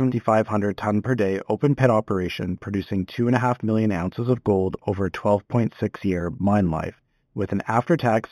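Imaging from linear upsampling runs throughout. Straight-line interpolation, which fits 8 kHz speech raised to 44.1 kHz, leaves a faint 4 to 8 kHz mirror image, heard as metallic shimmer on sibilants.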